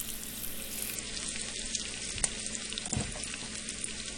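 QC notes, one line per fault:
0.95–4.18 s, adaptive stream at a lower bitrate: with no gap, the sound abruptly turns duller and more smeared until the end, which fits a drop from about 96 to 32 kbit/s AAC. On a spectrogram, everything above 10 kHz cuts off sharply, while the waveform stays continuous.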